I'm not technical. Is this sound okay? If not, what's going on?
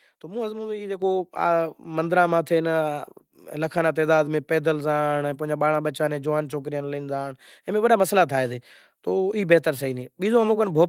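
No. At about 1.02 seconds the call software decided the microphone was too quiet and turned its input volume up in one step, a microphone volume stepped up fault. The talking and the background noise suddenly jump louder together at that moment.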